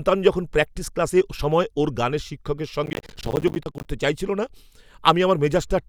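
Speech, with a burst of processor overload crackle from 2.86 to 3.85 s. Over that second, many short stretches of audio drop to silence with abrupt edges, giving a gritty tearing that stops when the load eases. The gaps point to buffers of around 10 ms, with dozens missing their deadlines. On a waveform the signal repeatedly cuts to near-silence with hard steps, and a spectrogram shows dense vertical broadband stripes across that span.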